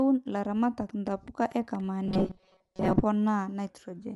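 Throughout, the speech has a grainy, breathy edge and nothing above 11.5 kHz, likely from Bluetooth LC3 compression near 48 kbps; a spectrogram shows a hard ceiling with noisy filled patches.

From 0.89 to 1.81 s, a train of clicks, around seven at roughly 6.6 per second with uneven spacing and about speech level, shows as sharp vertical spikes, likely from interference.

From 2.05 to 3.01 s, robotic sound from repeated short buffers gives a metallic 188 Hz buzz, fitting roughly 5.3 ms loops replacing most audio, with rigid evenly spaced harmonic stripes.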